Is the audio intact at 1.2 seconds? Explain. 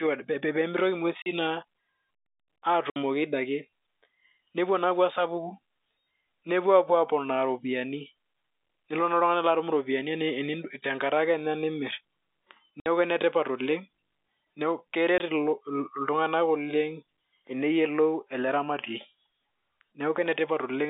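No. From 1.22 to 1.26 s there is packet loss filled with silence: a 40 ms hole where the receiver lost packets and played nothing in their place. The length fits two consecutive 20 ms packets. Because the speech stops and restarts abruptly rather than fading, the gap has hard edges. The surrounding G.711 telephone coding keeps the sound within roughly 250 Hz to 3.7 kHz on either side of the gap.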